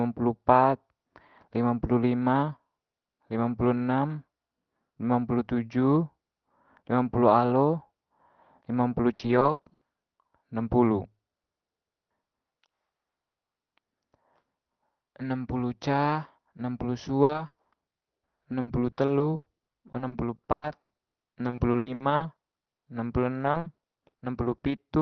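Repeated packet loss (robotic sound) occurs at 9.13–9.91 s, 17.23–22.88 s and 23.44–24.80 s. Lost packets are filled by stretching the preceding sound, making the speech choppy with pieces missing, with gaps up to 100 ms.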